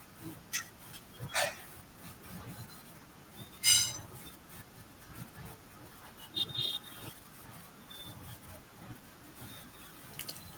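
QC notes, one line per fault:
Nothing to flag here, the speech comes through without any technical problems worth noting.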